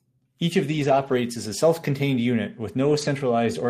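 Speech, with two stretches of lost packets rebuilt from error correction. From 0.71 to 1.13 s, just before "as a", and from 2.85 to 3.07 s, the sound turns rougher and noisier without any gap. Low-bitrate backup copies replaced the missing audio, about 220 ms and 120 ms of it.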